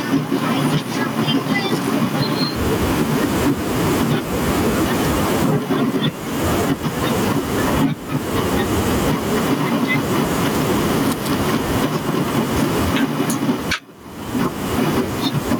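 Speech recorded with gain pumping throughout, likely from input gain set far too high and a fast limiter or compressor clamping each loud syllable. The room noise sits about 34 dB below the speech, and the gain swings by roughly 15 dB. On a waveform the envelope looks flattened, with peaks squashed to a similar height.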